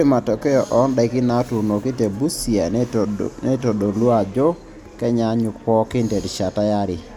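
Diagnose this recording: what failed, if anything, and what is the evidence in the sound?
Nothing failed, and no evidence of a fault can be heard anywhere in the recording.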